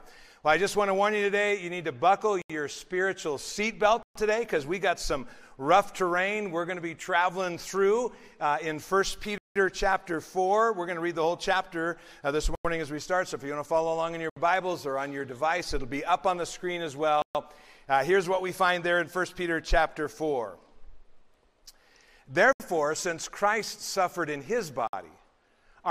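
The sound cuts to silence at 2.42, 4.03, 9.38, 12.55, 14.30, 17.22, 22.53 and 24.87 s, each gap lasting 58 to 177 ms before playback picks up. This is likely a Bluetooth stall, where the headphone buffer ran dry. A waveform shows flat lines, and a spectrogram shows clean vertical blank bands.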